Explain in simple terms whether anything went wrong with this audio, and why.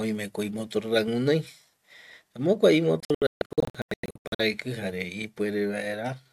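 Digital broadcast dropout from 3.00 to 4.40 s: the receiver lost its signal, so the speech keeps cutting to brief silences, and what was sent during those gaps is gone.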